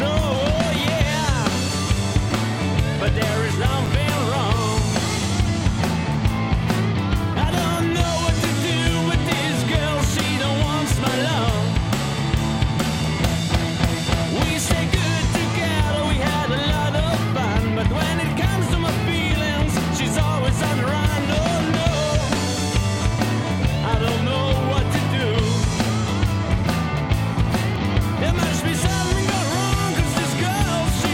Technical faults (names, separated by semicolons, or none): block of digital silence